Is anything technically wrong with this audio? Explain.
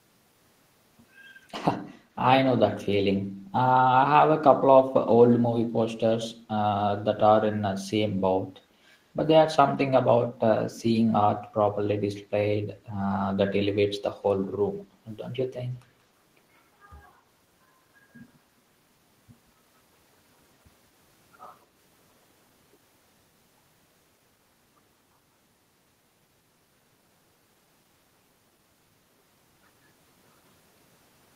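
Yes. From 1.84 to 1.96 s there is a brief echo leak. A faint copy of the speech returns 176 ms late, well below the direct level. Its likely cause is a loudspeaker-side echo canceller letting microphone pickup through. A spectrogram shows it as a weak, delayed ghost of the preceding harmonics.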